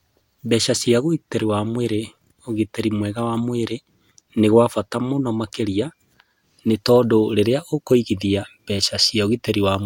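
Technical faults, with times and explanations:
No technical faults, with times and explanations, are present in this clip.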